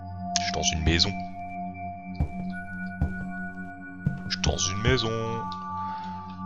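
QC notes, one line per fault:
No fault found.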